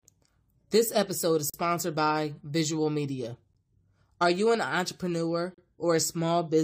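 Hard-edged silent holes break the speech at 1.50 to 1.54 s after "episode is", at 3.53 s, and at 5.54 to 5.58 s after "you an entrepreneur". These are gaps between stream segments: the timestamps of adjacent 2-second segments don't meet, so the player inserts 39, 13 and 35 ms of silence.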